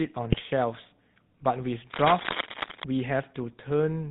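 The speech runs through the GSM full-rate codec for its whole length. It is band-limited with nothing above 4 kHz, and it has the gravelly, buzzy texture of a vocal-tract model driven by a sparse, regularly spaced pulse excitation rather than the real waveform. The damage is plainly audible throughout, and the overall character fits the 13 kbps full-rate GSM coder.

From 0.32 to 0.41 s there is a short burst of GSM bit errors. Over those 90 ms the decoder briefly produces squawking, gargled output. The corrupted filter, pitch and gain parameters have bent the spectrum or blown up the level frame by frame. The span fits roughly four 20 ms codec frames being hit on a noisy radio link.

From 1.92 to 2.84 s, dense, uneven bursts of scratching and rustling sit over the speech at roughly the same loudness as the speech itself. This is cable scratch noise. The rapid, irregular crackle points to a worn cable, connector or control being moved, most likely one whose contact resistance fluctuates during that movement. 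It then stops after about 0.9 s.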